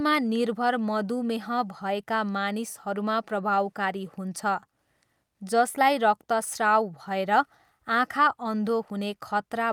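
Speech recording with no audible technical faults anywhere.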